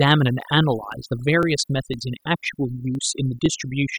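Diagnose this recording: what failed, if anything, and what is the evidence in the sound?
Overdone noise removal in the processing stage is suppressing frequency bands near the noise estimate throughout, leaving near-silent gaps with twinkling specks.

Overlapping chunks at the buffer stage: each half-second block starts 7 ms early, replaying that slice as stutters at 0.42, 0.92, 1.43, 1.94, 2.44, 2.95 and 3.46 s.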